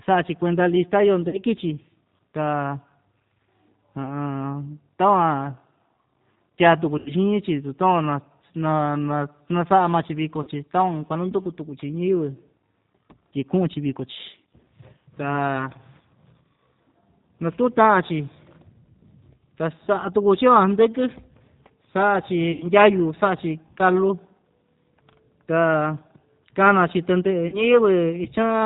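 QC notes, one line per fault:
throughout, G.729 codec (G.729A at 8 kbit/s): the speech passes through a low-rate VoIP coder that rebuilds it from a vocal-tract filter, a pitch predictor and a few pulses per frame. Nothing above 4 kHz survives, and the damage is plainly audible as a rough, synthetic, band-limited sound.
1.29–1.41 s, 6.98–7.12 s, 10.43–10.49 s, 22.52–22.67 s, 27.48–27.65 s, VoIP packet loss concealed by the speech codec: audio went missing in the network, about 40 ms in the first, third and fifth gaps and 80 ms in the second and fourth. The decoder extended its last pitch and filter with falling gain, so each gap turns into a fading buzzy tone or coloured noise that stays weak briefly after speech resumes. The first follows "kuenda lista yoo".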